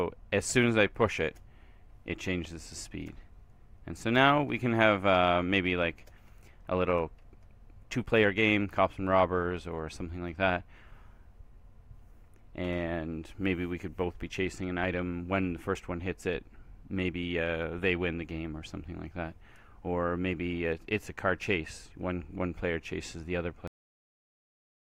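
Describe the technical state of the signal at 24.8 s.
At 24.8 s the signal is digital silence from a cut-off end: the final buffers were never written, so the sound stops abruptly at 23.67 s without decaying, unlike a fade-out, and never resumes, unlike a dropout.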